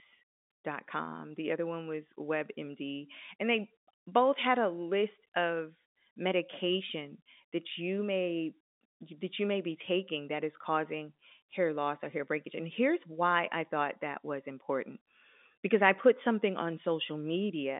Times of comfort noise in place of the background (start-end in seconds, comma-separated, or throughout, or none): none